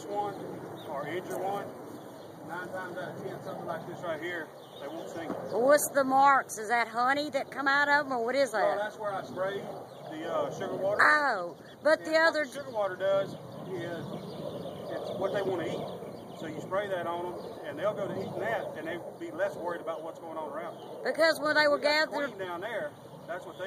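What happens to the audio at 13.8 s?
Nothing goes wrong at 13.8 s; the audio plays through that moment intact, with no dropout, click or other disturbance.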